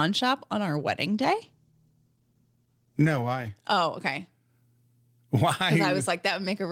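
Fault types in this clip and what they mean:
Call bitrate drop: the encoder was starved of bits, so the speech turns coarse and muffled, which fits a fall from 32 to 13 kbps.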